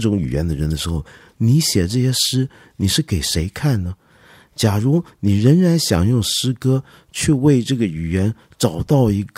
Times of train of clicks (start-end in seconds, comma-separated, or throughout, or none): none